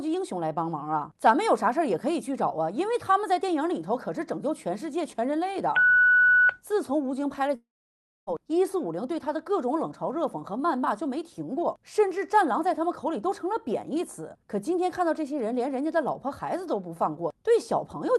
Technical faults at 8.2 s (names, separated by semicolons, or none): long network dropout